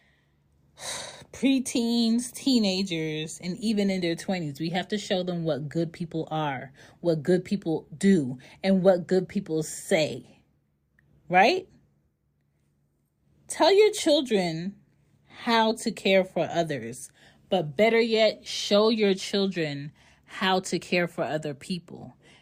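Nothing in the speech stood out as a technical problem on listening.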